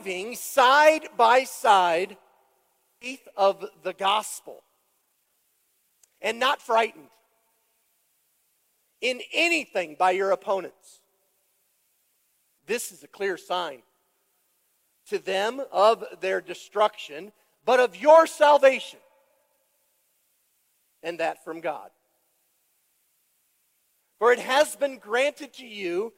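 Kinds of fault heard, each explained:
skip ahead: At 3.01 s the playback jumps forward abruptly with no filler in between. Roughly a second of audio is simply gone. It was dropped in transit or discarded when the buffer overflowed, while later audio was already queued. The two sides of the jump meet almost directly. The listener loses that stretch, and the delay shrinks by about a second at once.
jitter buffer speed-up: From 3.12 s to 7.49 s the sound runs fast, at about 112 percent of normal speed. The pitch stays the same. The receiver's buffer was holding more audio than its target. To reduce the delay, it cut out many short pieces, each one or a few pitch periods long, one after another. Around half a second is removed in total. This stretch sounds hurried and compressed in time.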